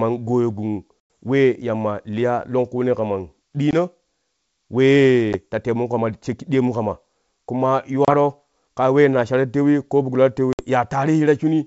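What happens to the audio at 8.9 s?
Nothing goes wrong at 8.9 s: the audio is intact there, carried over G.722 wideband telephone coding at 64 kbit/s with at most a faint trace of the codec.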